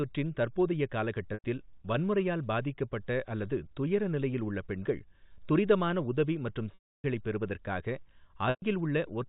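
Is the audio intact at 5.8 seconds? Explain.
Yes, at 5.8 seconds the speech is intact, with nothing there beyond the band limit to 4 kHz of the G.711 telephone coding it passes through.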